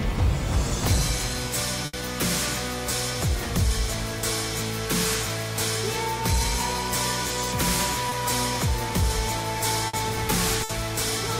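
Bursts of packet loss at 1.85 to 1.95 s, 9.87 to 9.95 s and 10.63 to 10.71 s left holes of 60 to 80 ms that the receiver bridged by stretching the last sound, fading it out before the audio jumps ahead. A short concealed packet loss at 8.09 to 8.13 s dropped about 20 ms, patched from the preceding sound into a brief smear.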